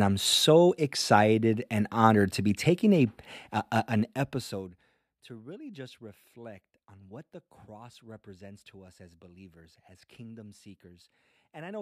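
A speech clip with zipper noise from 3.82 to 5.07 s, between "be taking a a" and "to really just reflect": the level falls by roughly 25 dB in unsmoothed steps, around 40 per second, each leaving a tick.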